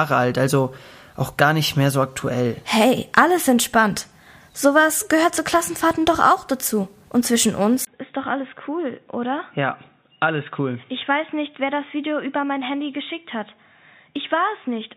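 At 7.85 s a 20 ms gap precedes duller, quieter sound capped near 3.8 kHz with fresh low-level noise, likely an input switched to a poorer device.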